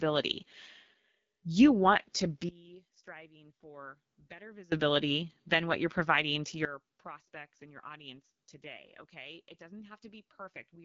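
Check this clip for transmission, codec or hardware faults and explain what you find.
Two faults are present: coding damage across the whole clip and two abrupt level drops.

AMR wideband (HD Voice) codec, throughout: speech is rebuilt from a pulse-driven vocal tract model, with nothing above 7.5 kHz. The rough, raspy texture fits a low rate of about 8.85 kbit/s.

Sudden gain jump, 2.49 to 4.72 s and 6.65 s to the end: speech and background fall together instantly, by about 23 dB and then about 20 dB, likely from gain applied without a ramp.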